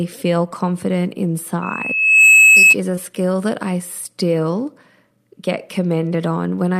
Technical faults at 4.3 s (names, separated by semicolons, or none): none